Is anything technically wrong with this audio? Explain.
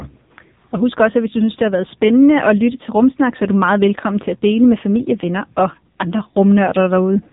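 Yes. Throughout, the speech carries AMR narrowband mobile codec damage: nothing above 3.8 kHz survives, and heavy buzzy, synthetic coloration points to a low mode near 6.7 kbps.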